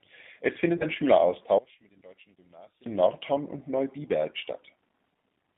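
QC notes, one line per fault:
throughout, G.729 codec: Speech sounds rough, slightly synthetic and boxed in, with nothing below about 150 Hz or above 3.6 kHz. The decoder rebuilds each 10 ms frame from a vocal tract filter, a pitch predictor and a few pulses, which fits an 8 kbit/s coder.
0.77 to 0.86 s, VoIP packet loss concealed by the speech codec: The sound smears into a brief buzzy tone or coloured noise that fades, and stays weak afterwards. About 30 ms went missing, which points to a single lost packet; the decoder stretched its last pitch and filter, then needed frames to recover.
1.59 to 2.86 s, one channel inverted: The centred speech drops by about 20 dB, leaving a faint remnant before returning at full level. This is likely reversed polarity on one stereo channel, so the shared centre cancels when both channels are summed to mono.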